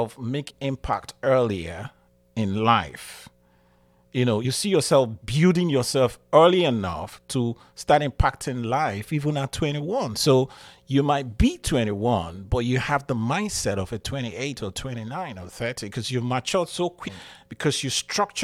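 At 0.49–0.51 s, just before "impact earlier in life", a short glitch marks damaged data in a compressed stream. It recurs at 4.44 s between "you know" and "see yourself building yourself", at 7.08–7.10 s, and at 17.07–17.09 s after "because you matured so". Each time, corrupted frames are misread and the decoder loses sync until it finds the next frame header. Every blip is brief.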